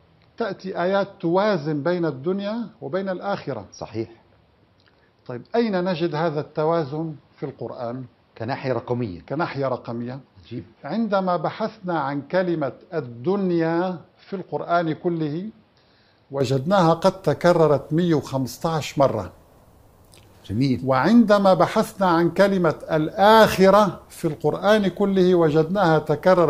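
Input switched to a poorer device, from 0.0 to 16.41 s: for this stretch the audio is band-limited, with nothing above 5.6 kHz, so it sounds dull and boxy. It is also a few decibels quieter and carries a faint new background noise well beneath the signal. At 16.41 s the top end and level return with no gap. The likely cause is that the recording began on a narrower-band microphone or headset profile and then switched to the proper input.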